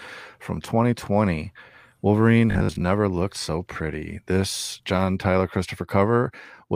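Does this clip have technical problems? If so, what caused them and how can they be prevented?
Yes. From 2.51 to 2.83 s the speech collapses into a stiff 50 Hz buzz, the classic robotic sound from repeated short buffers. It's likely that new audio arrived too late, so playback kept looping the last 20 ms, about half that stretch, while the real audio got skipped. A larger jitter buffer or steadier delivery would keep playback from running dry.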